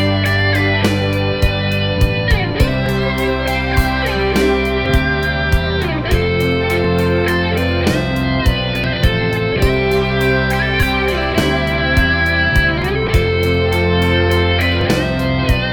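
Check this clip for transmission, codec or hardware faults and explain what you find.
A regular skip runs through the clip, at 2.86, 4.86, 6.85, 8.84, 10.83, 12.82 and 14.81 s. Each is a tiny skip where the waveform jumps, repeating about every 2 seconds. This is overlap between stream segments: neighbouring 2-second segments carry overlapping time stamps, so the player trims 8 to 16 milliseconds of genuine sound at each boundary.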